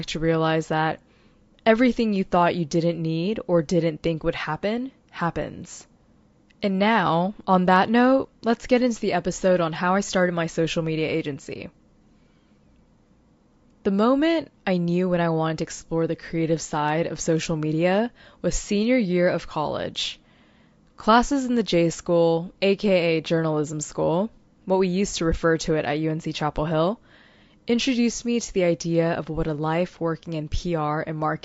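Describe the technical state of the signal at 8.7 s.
At 8.7 s the speech signal is intact, with no dropout, clipping, glitch or other technical fault audible at that moment.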